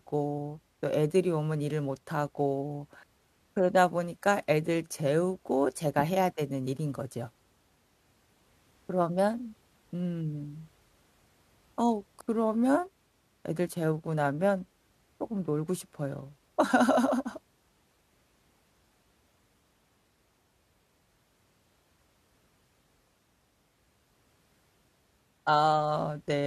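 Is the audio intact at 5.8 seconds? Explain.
Yes, the audio is intact at 5.8 seconds, with no fault audible at that moment.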